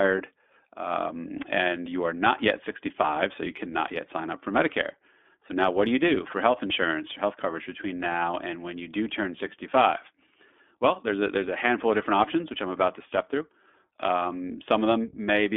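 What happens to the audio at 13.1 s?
At 13.1 s the speech sounds thin, boxy and slightly rough, with a synthetic graininess, and this is true across the whole clip rather than just at that moment. It is iLBC codec damage: the band stops at about 250 Hz below and 3.5 kHz above, and each 20 ms frame's excitation is coded on its own, with no help from the previous frame. That leaves plainly audible coarseness, which fits a rate of around 15.2 kbps.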